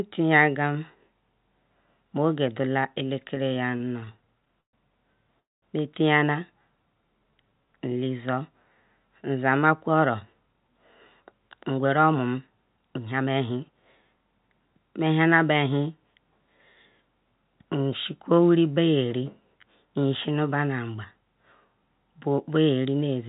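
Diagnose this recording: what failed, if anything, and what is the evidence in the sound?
Network and jitter buffer. Repeated stalls (stutter) from 3.28 to 4.75 s: 19 brief holds, longest 121 ms, where the buffer ran dry and the last sound was stretched.

Between 5.40 and 5.64 s the sound hangs, fades, then sits silent for about 200 ms before resuming. This is likely a call audio freeze from delayed packets.

Jitter buffer slow-down from 6.59 to 8.05 s. Speech drags at 88% speed, same pitch, as repeated pitch periods add 182 ms to rebuild reserve.

Jitter buffer speed-up at 9.88 to 10.78 s and 11.20 to 14.18 s. Speech runs 9% fast at unchanged pitch as short periods are cut, about 0.4 s in total.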